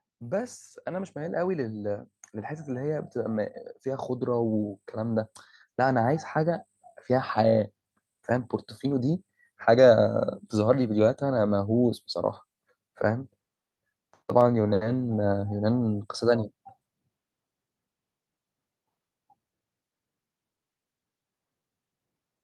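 From 0.18 s to 6.67 s, the level climbs steadily. This is automatic gain rising. The gain control judged the incoming speech too quiet and kept turning itself up. It did so slowly, adding about 10 dB over those six and a half seconds. The voice grows louder bit by bit. The background noise swells right along with it, because the gain lifts everything in the signal, not just the speech.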